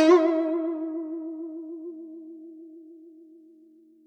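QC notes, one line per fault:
No faults heard.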